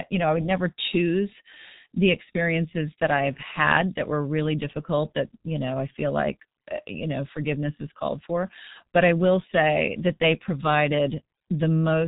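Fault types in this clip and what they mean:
G.723.1 codec, throughout: a low-rate telephony coder, consistent with about 6.3 kbit/s, rebuilds the speech from a slowly updated model in 30 ms frames, and nothing passes above 3.8 kHz, and the voice comes out muffled and hoarse with heavily smeared consonants.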